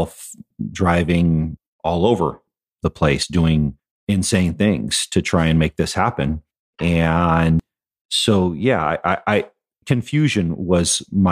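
At 3.23 s and again at 7.60 s, the speech jumps ahead. These are compressed frames skipped. About a tenth of a second is missing each time, which fits one 92.9 ms frame.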